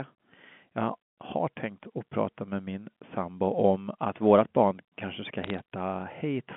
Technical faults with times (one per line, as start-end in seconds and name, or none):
5.44-5.60 bit errors on a digital phone line